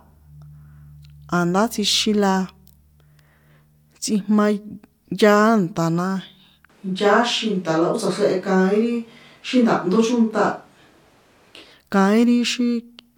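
From 6.70 s to 11.71 s the speech abruptly turns roomy and hollow, with thinner bass, at much the same level and with a room-noise floor about 35 dB below the speech. This points to a switch to a distant microphone, likely after the close one failed. A spectrogram would show smeared reverberant tails and a weaker low end between those sharp boundaries.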